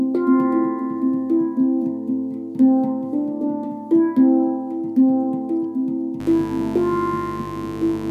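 From about 6.2 s right through to the end, a mains buzz comes in underneath the audio: a steady, raspy drone built on 50 Hz with a stack of harmonics climbing up into the kilohertz range. It sits fairly prominently, only something like 15 dB below the signal. That gritty edge comes from sharp switching spikes landing twice per mains cycle, the kind of thing a dimmer, a rectifier or a missing shield lets into the chain.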